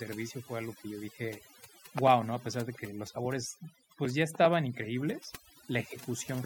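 Throughout, the speech sits over near-silent, twinkling background: overdone noise removal, with bands near the estimated noise cut so hard that quiet speech vanished too.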